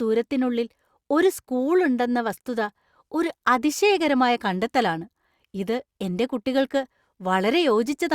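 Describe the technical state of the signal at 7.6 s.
At 7.6 s the speech signal is intact, with no audible technical fault at that moment.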